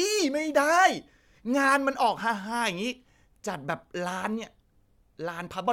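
Speech recording, with no technical faults to report. Nothing in the signal chain calls for comment at any point in the clip.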